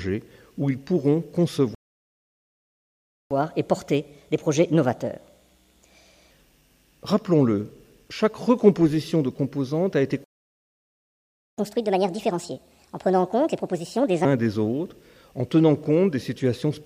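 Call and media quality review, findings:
Playback stall, 1.75–3.31 s (1.56 s) and 10.24–11.58 s (1.34 s): player likely starved of data or thread blocked; sound cuts to silence mid-flow, then resumes.

Catch-up at higher speed, 3.31–6.31 s (1.25x, about four semitones sharp) and 11.58–14.25 s (1.5x, about a fifth sharp): backlog resampled faster; sound runs quick and high, then normal.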